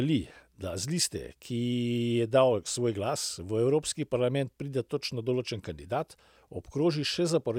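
Nothing in the speech stood out as a technical problem on listening.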